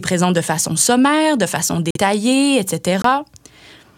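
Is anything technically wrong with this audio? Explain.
Yes. This speech has two corrupt frame muted dropouts, from 1.91 to 1.97 s and from 3.02 to 3.04 s. Each is a sudden hole of silence, about 70 ms and then about 20 ms, with the speech resuming on time afterward. Bit errors damaged compressed frames, the decoder rejected them, and the player filled their slots with silence. The lengths fit two lost frames in the first gap and one in the second.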